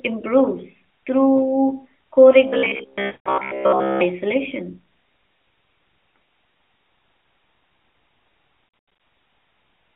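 Just after "improves through co", from 2.48 s to 4.01 s, the audio turns into robotic sound from repeated short buffers. It is likely caused by new audio arriving too slowly, so playback loops a tiny slice of about 15 ms while most of the real material, roughly two thirds or more, is skipped. That loop imposes a fixed 66.7 Hz buzz, giving a hard, metallic drone that only loosely tracks the speech. On a spectrogram this appears as a rigid comb of harmonics spaced 66.7 Hz apart with vertical striations every 15 ms. The waveform shows near-identical short blocks repeating.

Inside that stretch, from 3.06 s to 3.38 s, lost AMR speech frames add a second problem. About 200 ms of audio, which fits a run of ten 20 ms frames, failed to decode. The decoder carried the last good pitch and spectral shape forward while lowering the gain, so the sound stretches out and sags toward silence before recovering somewhat roughly. 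On the spectrogram the formants and harmonics flatten into horizontal bands and fade. The waveform envelope decays steadily across the gap.

The same fault returns from 8.68 s to 9.00 s. This time about 220 ms is lost in pieces scattered over 320 ms, and the longest unbroken gap is 100 ms. This comes across as a chain of brief dips and warbles rather than one fade. The spectrogram shows short smeared, dimming patches between normal segments, and the waveform shows repeated amplitude notches.

Throughout the clip the narrowband mobile coding, which points to AMR-NB at 12.2 kbps, limits the band to roughly 300 Hz to 3.5 kHz. As a result the spectrogram shows nothing above 4 kHz.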